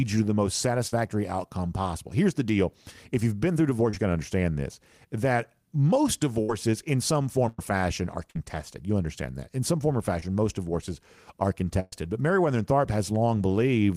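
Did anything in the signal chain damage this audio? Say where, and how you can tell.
Yes, the network stage damaged it. Burst of packet loss occurs at 0.87 s (after "you to the most"), 6.42, 7.49 (after "in some"), 8.30 and 11.80 s. The receiver held the last sound for 48 to 122 ms, fading it, then jumped ahead. A spectrogram shows a smeared, decaying band and then an abrupt restart.

Short concealed packet loss occurs at 3.90 s and at 10.20 s, between "some form or" and "most divorces are". Only 18 to 27 ms were synthesised from the preceding sound before blending back. The result is a brief wobble, visible as a short smudge in the waveform and harmonics.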